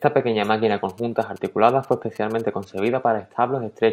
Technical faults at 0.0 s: none

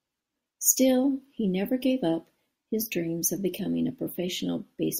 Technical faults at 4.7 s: none

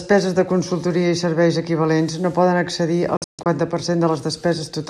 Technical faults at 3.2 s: digital broadcast dropout

